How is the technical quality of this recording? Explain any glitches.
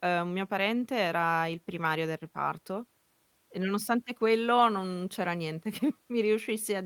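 The recording has one glitch, a lost packet rebuilt from error correction, at about 4.59 to 4.61 s in the speech. It's a brief rough, noisy patch of about 20 ms rather than a dropout, which fits a single lost packet. The next packet carried a low-bitrate backup copy of that stretch, and the decoder played that copy instead of leaving silence. You don't hear a gap, just a short grainy blip where the quality dips.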